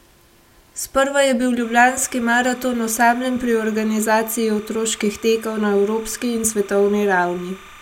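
Linear timecode running at 29.97 frames per second leaks in from a neighbouring track or cable from 1.62 s, just after "je bil", to the end. This timecode bleed adds a steady chirping warble behind the speech, flipping between roughly 1 and 2 kHz, about 25 dB below it.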